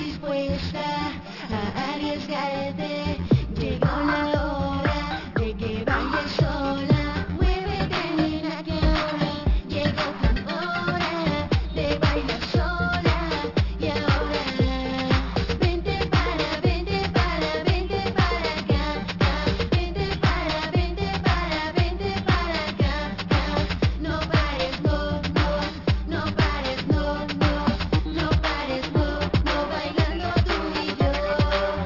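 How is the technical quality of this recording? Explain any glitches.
The recording has a clear technical fault that runs through the whole clip.

Aliasing, present throughout: the audio was downsampled, which points to a drop from 48 kHz to 12 kHz, without filtering out content above half the new rate. Everything above 6 kHz folds back below that edge as unrelated, fairly strong tones, making sibilant and bright sounds gritty and metallic.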